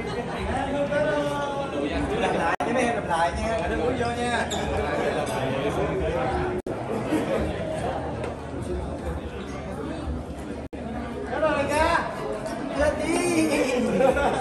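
Short dropouts of silence, about 56 ms at 2.55 s and about 64 ms at 6.60 and 10.67 s, interrupt the sound every 4 s with smeared edges. This is a gap at a join of encoded pieces: separately encoded segments kept their codec start delay and final-frame padding when they were joined.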